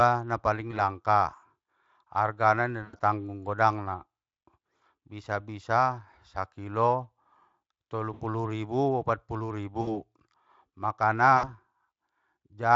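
VoIP packet loss concealed by the speech codec hits this speech five times. The gaps are after "na paling" at 0.71 s, after "argana inda" at 2.83 to 2.99 s, then 8.13, 9.81 and 11.37 s. The Speex decoder extrapolates the missing audio. It stretches into a fading buzzy tone or coloured noise, then stays weak briefly afterwards.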